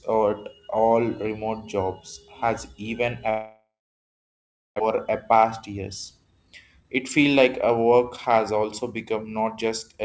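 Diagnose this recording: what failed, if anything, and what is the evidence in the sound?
From 3.30 to 4.82 s the speech stops. The last sound smears on as a brief fading buzz, then there's about 1.08 s of near-silence before the speech picks up again, with roughly a second of material simply gone. That's the signature of a long network dropout, most likely packets failing to arrive. The receiver's concealment stretched the final good sound across the gap, gave up, and resumed with whatever arrived next. The G.722 path, band-limited at 8 kHz, carries it all.

Right after the gap, from 4.90 s to the end at 10.02 s, the talker sounds a bit hurried, about 7% fast, but the pitch doesn't shift. That's a jitter buffer speed-up at the network/buffer stage. The dropout left the buffer holding around half a second more audio than it wants, so the receiver kept snipping out tiny pitch-period-sized slices to drain it, roughly 400 ms in total, which compresses the timing without touching the pitch.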